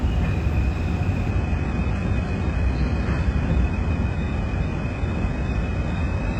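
At 1.31 s the adaptive stream switches abruptly, without a gap, to a lower bitrate. Treble is missing above 11 kHz and artefacts rise through the end, consistent with a drop to very low-bitrate HE-AAC.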